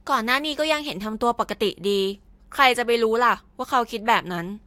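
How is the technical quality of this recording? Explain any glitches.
The technical quality of this recording is sound, with no glitches to explain.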